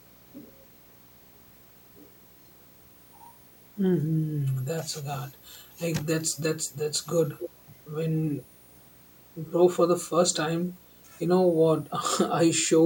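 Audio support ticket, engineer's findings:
Video or display buzz, whole clip: low buzz at 59.94 Hz with hash above it, plus a thin whine at 15.7 kHz, about 25 dB under the speech. Screen or video cable coupling into the audio path at field and line rates.

Echo leak, 7.38–7.5 s: short scrap of delayed repeat of the speech, 282 ms late, roughly 10 dB down. Likely far-end loudspeaker pickup not fully removed by the echo canceller and sent back.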